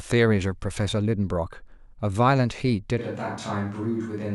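At 3.00 s the speech turns abruptly roomy and hollow, thinner in the bass and about 5 dB quieter, and stays so to the end: a switch to a distant microphone, likely. The waveform steps down, while the spectrogram loses low-frequency energy and shows a noise floor roughly 35 dB below the speech.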